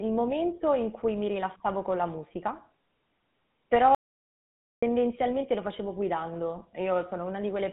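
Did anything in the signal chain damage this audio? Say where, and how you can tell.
Yes. GSM full-rate coding damaged it at the codec stage. Its pulse-excited vocal-tract model makes the speech buzzy and gravelly, with nothing above 3.8 kHz.

An audio dropout to silence runs from 3.95 to 4.83 s. The speech cuts to silence, with no room tone. Likely a lost input link.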